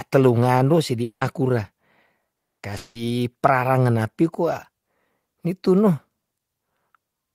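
Three gaps show up in the speech, at 1.03 to 1.24 s, 2.35 to 2.62 s and 2.77 to 2.98 s, and they sound like a long network dropout, likely from audio that never arrived. In the first and third the last sound smears into a fading buzz, and each time the speech picks up later with a chunk gone. The first settles into about 90 ms of silence, the second is silent for its whole 240 ms, and the third never quite goes quiet.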